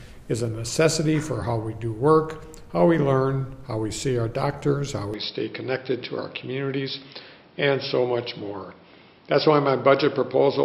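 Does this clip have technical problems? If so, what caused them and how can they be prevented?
Yes. From 5.14 s to the end, the sound narrows with nothing above 5.5 kHz, turning duller without a gap or level jump, likely an input switched to a poorer device. Lock the recording input to one microphone and disable automatic device or headset-profile switching.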